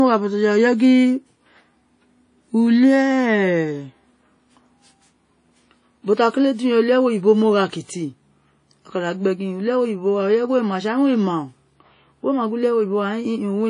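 Throughout, the speech rings and smears with hiss that breathes, likely WMA compression near 32 kbps. A spectrogram is empty above 10.1 kHz, with patchy holes.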